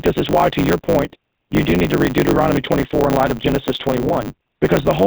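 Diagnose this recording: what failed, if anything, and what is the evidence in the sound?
The whole clip has been through a codec stage with plainly audible damage, and it's GSM full-rate. The speech has that buzzy, gravelly texture and nothing above 4 kHz, which points to the old 13 kbps GSM coder. It models the vocal tract and drives it with a sparse, regularly spaced pulse excitation, so the fine detail of the voice gets replaced by a coarse, rasping approximation.

There's a block size mismatch (truncated) in the buffer stage throughout. You can hear a steady 100 Hz buzz under everything, and the speech runs about 1.16 times fast while keeping its timbre. The writer produces longer blocks than the reader takes, and the tail of each block gets dropped, which fits 512-sample blocks being written. The chopped edges repeat at the block rate and cause the buzz. The discarded tails shorten the timeline.

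Two lost GSM frames show up in the network path, one at 0.86 to 0.89 s, right after "is why to your", and another at 4.08 to 4.11 s. Each gap is about 20 ms, roughly one frame's worth. The decoder covers each gap by repeating the last good frame's parameters, so you hear a brief, rough metallic ring instead of a clean dropout.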